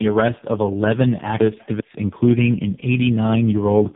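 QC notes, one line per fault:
throughout, tandem speech coding: the speech is rough, muffled and warbly with nothing above 3.4 kHz. That fits roughly four speech codecs in a row, ending in something like AMR-NB at 6.7 kbit/s, each re-coding the previous stage's already degraded output.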